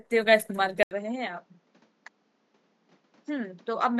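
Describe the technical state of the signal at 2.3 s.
At 2.3 s the speech sounds duller and a little quieter than at the very start, with a new, faint background hiss sitting well beneath it and nothing above 7.6 kHz. That character holds from 0.83 s to the end of the clip, after an 80 ms gap of silence at 0.83 s. The likely cause is an input switched to a poorer device mid-recording: the replacement device passes a narrower band and brings its own level and noise floor.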